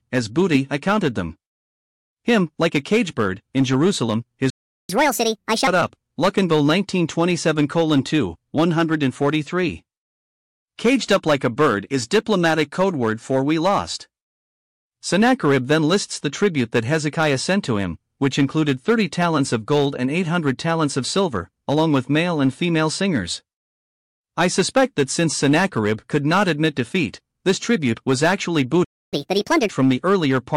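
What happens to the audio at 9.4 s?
Nothing goes wrong at 9.4 s: the speech there is intact, with no dropout, click, distortion or other fault.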